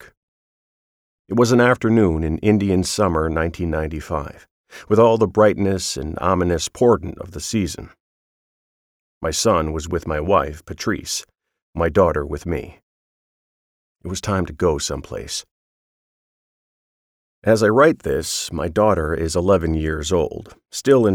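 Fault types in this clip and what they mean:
No faults turn up anywhere in the clip.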